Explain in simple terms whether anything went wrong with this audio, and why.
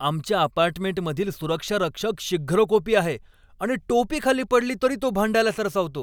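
Nothing went wrong technically with this speech recording: the signal holds steady all the way through, with no dropouts, glitches or other damage to be heard.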